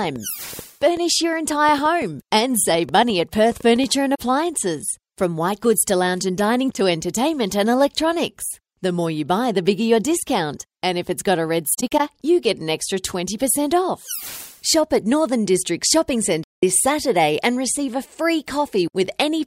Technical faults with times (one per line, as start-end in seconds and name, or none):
0.04-3.85 train of clicks
4.15-4.20 AAC frame loss with muting
11.74-12.00 AAC frame loss with muting
16.44-16.63 AAC frame loss with muting